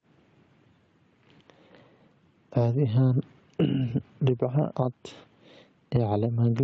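Gain pumping runs throughout. The gain swings around 15 dB. A fast limiter is likely fighting excessive gain.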